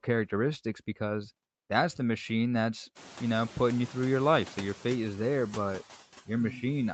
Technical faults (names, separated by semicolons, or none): noise suppressor artifacts